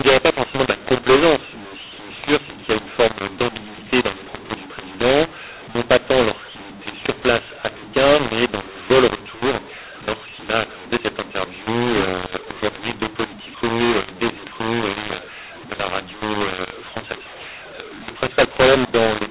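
From start to finish the speech sounds harsh and gritty, with levels scrambled and pauses filled with hiss instead of silence. It is a mu-law and A-law mix-up: the G.711 telephone stream was encoded as A-law but decoded as mu-law, so each sample lands at the wrong level.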